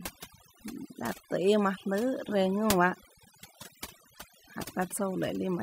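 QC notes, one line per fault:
Throughout: overdone noise removal. The noise reduction was set too aggressively, so individual frequency bands sitting near the noise estimate are pulled down or gated off entirely, taking the quieter parts of the speech with them. Between phrases the background drops and breaks up into twinkling specks.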